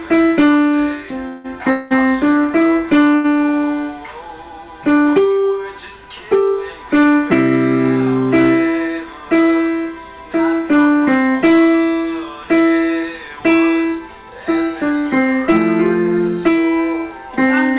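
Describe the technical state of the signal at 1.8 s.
At 1.8 s the signal sits inside a call audio freeze spanning 1.70 to 1.93 s, likely from packets held up so the jitter buffer ran dry. The last sound is stretched into a fading buzz or hiss for about 0.2 s, then resumes intact, shifted later. Spectrograms show smeared horizontal bands below 4 kHz; waveforms show a decaying envelope.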